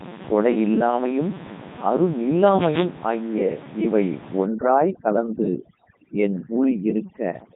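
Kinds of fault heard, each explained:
Codec 2 vocoder: The speech is rebuilt from pitch, voicing, energy and a coarse spectral envelope, not the original waveform. It sounds robotic and buzzy throughout, with heavy damage. Nothing reaches above 3.8 kHz. The thin, coarse result fits a 3.2 kbit/s mode.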